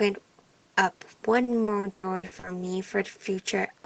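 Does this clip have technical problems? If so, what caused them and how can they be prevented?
Yes. From 1.43 to 2.46 s the speech turns choppy and robotic, with pieces dropping out. This is repeated packet loss: seven gaps, the longest 80 ms, were each patched by stretching the previous sound, so about 35% of that stretch is filled in. A more stable network or a deeper jitter buffer with forward error correction would prevent it.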